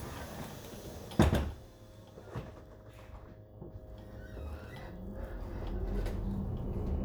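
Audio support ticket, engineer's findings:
No technical faults are apparent in the signal, with no defects identified in any component of the playback path.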